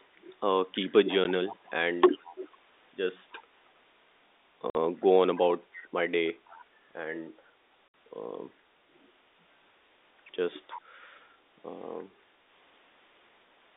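At 0.00 to 0.04 s a faint copy of the speech trails the talker by 324 ms, about 40 dB down. This is echo leak, likely a loudspeaker at the far end whose echo canceller let some of its own pickup return. It recurs at 1.08 to 2.33 s (about 20 dB down), 3.46 to 3.54 s (about 40 dB), 5.36 to 5.82 s (about 20 dB), 6.48 to 6.65 s (about 30 dB) and 10.66 to 10.78 s (about 15 dB). On a spectrogram it shows as ghost harmonics offset 324 ms behind the originals, confined like everything else to the 250 Hz to 3.7 kHz telephone band.

From 1.03 to 1.08 s, for about 40 ms, and again at 2.18 to 2.42 s, the talker's level drops by up to about 15 dB. This is speech suppressed in double talk, likely the canceller ducking both voices while the echo overlapped them. The waveform envelope visibly pinches in those spans.

Packet loss filled with silence cuts a 10 ms hole at 1.24 s, a 50 ms hole at 4.70 to 4.75 s and a 60 ms hole starting at 7.89 s. 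These hole lengths fit 10 ms packets. Each shows as a flat silent gap with abrupt edges.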